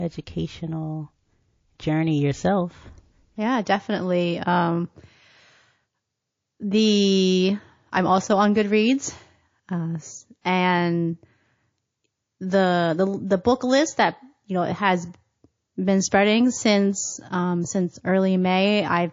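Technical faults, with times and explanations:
Throughout: MP3 compression, likely from a low-bitrate encode; the damage is plainly audible, which fits something around 32 kbps. Weak detail flickers in and out between frames, so the speech sounds watery and swirly, with smeared edges.
10.41 to 10.45 s: pre-echo, a hiss about 16 dB up that starts 37 ms before a sharp attack. Noise spread across a roughly 72 ms transform block spills into the quiet gap ahead, and it sounds like the encoder never switched to short blocks there.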